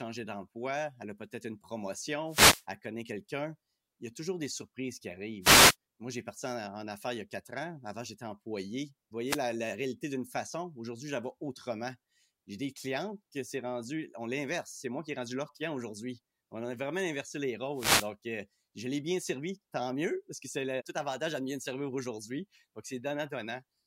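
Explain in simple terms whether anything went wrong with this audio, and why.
Four short bursts of static break into the speech. This is a wireless microphone noise hit. It happens at 2.27 to 2.65 s and at 5.41 to 5.76 s, right after "toujours des surprises qui". It happens again at 9.26 to 9.40 s, just before "réalité d'une façon", and at 17.73 to 18.10 s, between "a vraiment inversé les" and "euh je l'ai bien". Each time, the radio signal from the microphone briefly faded. The receiver's own hiss rushed in.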